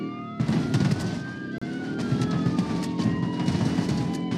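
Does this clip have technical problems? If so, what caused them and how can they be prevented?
Yes. A gap between stream segments occurs from 1.58 to 1.62 s: a hard-edged silence of about 33 ms. Two segment timestamps, which fit 4-second segments, fail to meet, and the player fills the gap with silence. No audio is lost. Keeping segment timestamps exactly contiguous when packaging prevents this.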